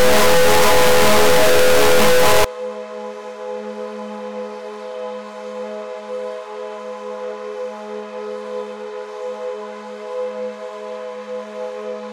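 From 0.0 to 2.44 s the audio suffers an integer read as float fault. The sample bits are interpreted as floating-point values, which fits 32-bit integer data being read as 32-bit float. Most values land near zero or far beyond full scale, so the output snaps between silence and clipping, producing a harsh, extremely loud square-wave buzz.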